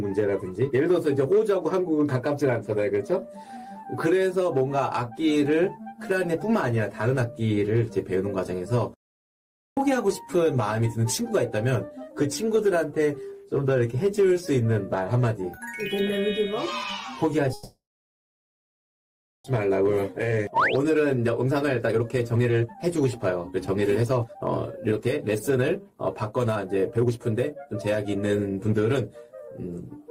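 Hard clipping runs through the whole clip: the signal is driven about 2 dB past what one stage can pass, so a small share of the peaks, around one percent of samples, are cut flat. This gives a brief crackle on loud moments rather than constant fuzz, and the pitch and timing stay intact.

At 8.94 s the sound stops abruptly and stays silent until 9.77 s, a gap of 0.83 s. This is a playback stall, likely from the player running out of data or being blocked. Unlike a call freeze, it drops straight to silence with no fading buzz.

From 17.53 s to 19.46 s a call audio freeze fills 1.91 s. The last sound carries on briefly as a decaying buzz, then about 1.66 s of silence follows. That tail is the jitter buffer, likely emptied by delayed packets, stretching what it had. Nothing is lost, and the audio resumes where it stopped.

From 19.70 s to 28.73 s a jitter buffer speed-up follows. The receiver trims many short pitch-period slices, roughly two seconds in total, and the audio runs at 121% speed. 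It sounds hurried, but the pitch is unchanged, which separates it from a simple faster playback.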